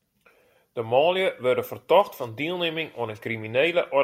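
Speech recording with no audible technical faults found on listening.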